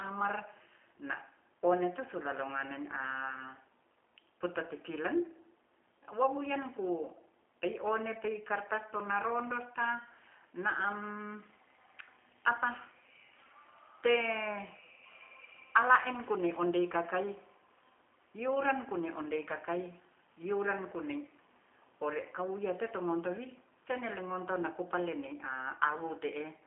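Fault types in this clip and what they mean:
G.729 codec: Low-rate VoIP coding rebuilds this speech from a filter model and sparse pulses, which fits about 8 kbit/s. Nothing passes above 3.6 kHz. The result sounds rough and synthetic throughout.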